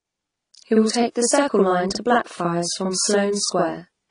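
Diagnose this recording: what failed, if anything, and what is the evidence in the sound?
Every syllable of the speech is followed by a second copy at equal strength, about 46 ms behind, heard throughout as a doubled, slap-backed sound rather than room reverb. This is channel delay (doubling) at the driver or buffer stage: one channel arrived one buffer late, and the delay fits a 2048-sample buffer at 44.1 kHz. When the two channels were summed to mono, the late copy stayed distinct instead of merging into one voice.

Throughout the clip the sound is dull and smeared. Nothing reaches above 10 kHz, and sibilants and sustained vowels carry a warbly, fizzy texture that is plainly audible. The likely cause is AAC compression at the codec stage, with damage that fits AAC-LC near 32 kbps. At that rate the encoder lowers its cut-off and leaves holes in the spectrum it cannot afford to code, or fills bands with substitute noise, which produces the swirling grain.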